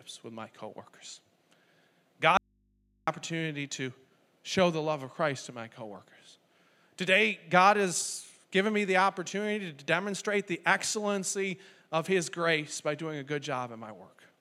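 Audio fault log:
2.37–3.08 s, audio dropout to a faint residue: the speech cuts off abruptly for about 0.7 s, leaving only a low mains hum roughly 40 dB below the speech level, then returns mid-flow. This is likely a brief loss of the incoming signal while the input stayed live and picked up hum.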